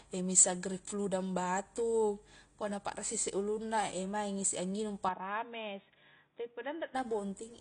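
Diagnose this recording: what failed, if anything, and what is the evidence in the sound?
AAC compression, throughout the clip, at the codec stage. The speech has nothing above 9.8 kHz, and the coding damage is plainly audible: a dull, smeared top end with warbly, fizzy sibilants. The likely cause is an AAC-LC encoder at a low bitrate, consistent with about 32 kbps. With so few bits, the encoder drops the highest bands outright and quantises the remaining spectrum coarsely, leaving holes in the spectrum or filling bands with substitute noise.

Input switched to a poorer device, from 5.09 s to 6.95 s, at the capture or driver stage. The band abruptly narrows to nothing above 3.8 kHz and turns boxy. The level drops by about 5 dB, and a faint new background noise sits well below the speech. There is no gap at the switch. The recording likely changed inputs to a narrower-band microphone or a headset call profile and then switched back.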